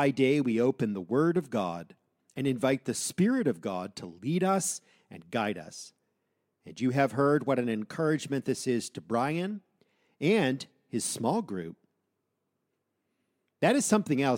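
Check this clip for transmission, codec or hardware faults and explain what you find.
No faults can be heard in this speech recording.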